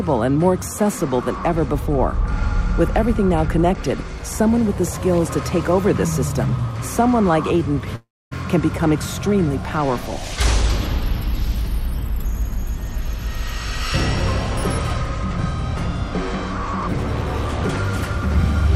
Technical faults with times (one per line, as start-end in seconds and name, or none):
7.95-8.33 long network dropout